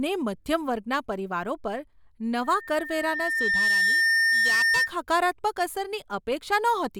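From 2.44 s to 4.93 s there is loudspeaker feedback squeal. A microphone is picking up its own loudspeaker, and the loop gain passes one at 1.8 kHz. That tone swells over about a second and a half. It ends up a few decibels louder than the speech.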